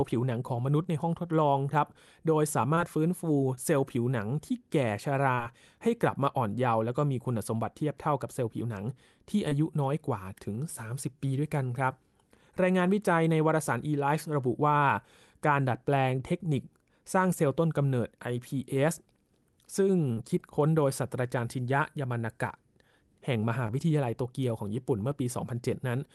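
Short concealed packet loss occurs at 0.83, 2.75, 3.55, 5.35, 9.49, 20.13 and 23.67 s. Each time about 20 ms of the call arrived too late to decode, and at 20.13 s about 40 ms. The receiver bridged each gap by extending the preceding sound and fading back into real audio, which produces a brief smear or wobble. On a spectrogram each shows as a thin vertical seam of smoothed, extended sound; the waveform shows a brief overly regular stretch. The speech above 12 kHz is missing, as expected from the Opus call path.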